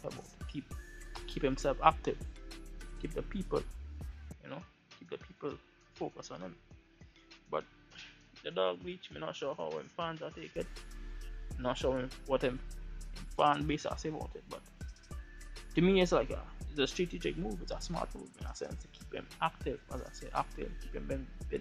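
From 4.32 to 10.56 s, the sound turns duller, somewhat quieter and faintly noisier, with nothing above 6.8 kHz. The input likely switched to a poorer device.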